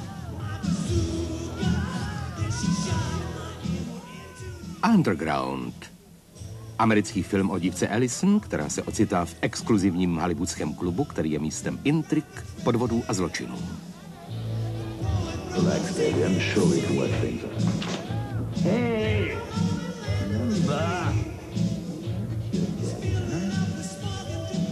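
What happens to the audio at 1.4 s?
Nothing goes wrong at 1.4 s; the audio plays through that moment intact, with no dropout, click or distortion.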